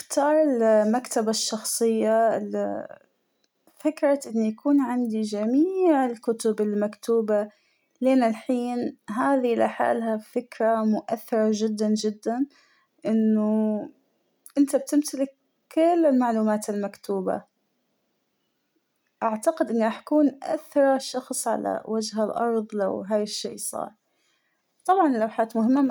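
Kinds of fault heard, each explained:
Resampler restarted on every block: each 20 ms block was converted separately, in what points to a 44.1 kHz to 48 kHz change, leaving a small error at every edge. Throughout the speech this produces a 50 Hz buzz heard only while signal is present.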